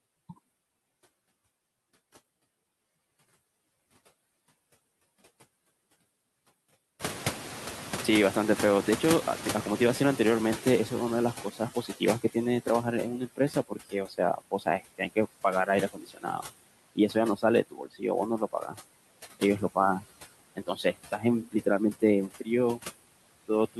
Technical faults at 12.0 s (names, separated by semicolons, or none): noise suppressor artifacts; noise suppressor catching up; speech cut by the noise suppressor